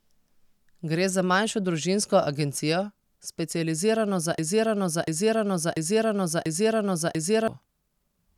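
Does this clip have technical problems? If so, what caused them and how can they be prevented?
Yes, there's a broken-record loop in this speech from 4.39 s to 7.48 s: a 0.69 s piece repeats four times back to back, and whatever should have played there is gone. The likely cause is a stalled player or stream resending its last buffered fragment. Watchdog checks that spot repeated buffers, plus adequate buffering, would prevent it.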